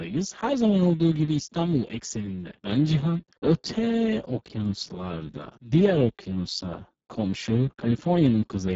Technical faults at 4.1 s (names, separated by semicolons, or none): Speex codec